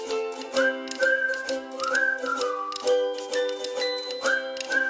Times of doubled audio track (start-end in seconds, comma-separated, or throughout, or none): none